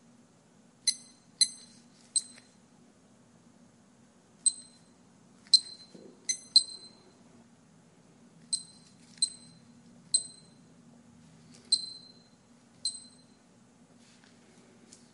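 No technical faults can be heard anywhere in this recording of sounds. At no point does anything call for a timestamp or a closer listen.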